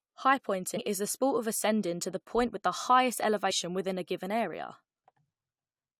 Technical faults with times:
0.76 compressed frames skipped

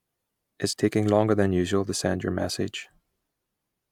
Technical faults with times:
none

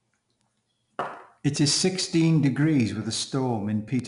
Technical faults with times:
0.00-4.08 4-bit ADPCM compression
0.41-3.99 word clock ticks

